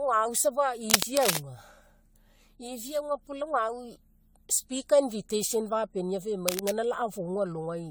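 Speech with generation loss throughout. The sound is swirly, hollow and smeared, with blurred consonant attacks and nothing above 20 kHz. This most likely comes from around seven successive lossy re-encodes, which fits an AAC-LC chain at about 96 kbit/s. Cable scratch noise appears from 0.87 to 1.38 s as dense, uneven rustling bursts about 5 dB above the speech. It returns more faintly from 6.48 to 6.70 s, about 5 dB below it. The likely cause is a worn cable or connector being moved.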